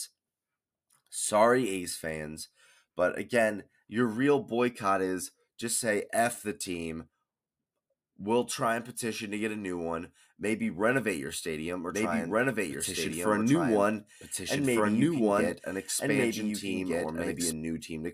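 A second copy of the same audio likely got mixed into the output, either because a slower capture path picked it up again or because an edit left two versions out of step. In this speech clip, from 11.9 s to 17.5 s, a doubled audio track runs about one and a half seconds behind the original at roughly the same loudness. The trailing copy is full-band and dry, with no decay or room colour, and it cuts in and drops out abruptly.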